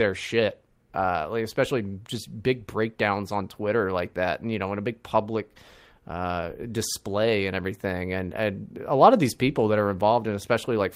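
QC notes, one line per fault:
No faults found in this speech clip. Nothing here calls for a QC entry.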